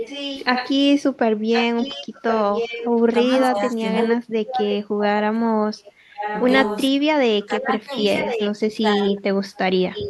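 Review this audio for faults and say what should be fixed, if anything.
Echo leak runs from 0.0 to 4.73 s, 5.84 to 6.83 s and 7.93 to 10.1 s. A delayed copy of the speech trails it by about 1.07 s, roughly 5 dB below the direct speech in the first and last stretches and about 10 dB below in the middle one. The likely cause is a far-end loudspeaker whose echo canceller let its microphone pickup pass back down the line. On a spectrogram, each syllable's harmonic pattern reappears shifted right by that fixed 1.07 s gap. On the waveform, the envelope repeats at reduced height. To prevent it, the far end should use a headset or tune its echo canceller for this long path delay.

Speech suppressed in double talk appears at 3.51 to 3.82 s with a dip of about 15 dB, at 4.82 to 5.58 s with a drop near 40 dB, and across 6.89 to 9.49 s, where about 1.5 s in total is pulled down by up to about 40 dB in pieces. 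The speech sinks or vanishes while the other side is also talking, likely because the canceller could not tell the talker from its own echo and attenuated both. On the waveform this shows as sudden envelope collapses, and on the spectrogram as dark gaps or faded upper bands. A full-duplex canceller with better double-talk detection would prevent this.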